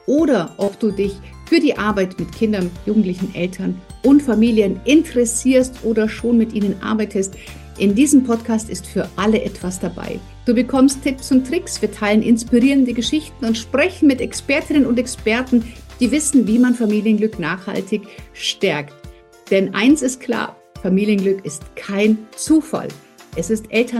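A brief smear at 0.64 to 0.68 s briefly blurs the sound before it settles. This is short concealed packet loss: about 30 ms of the stream arrived too late to decode, so the receiver extended the preceding audio across the gap and blended back in.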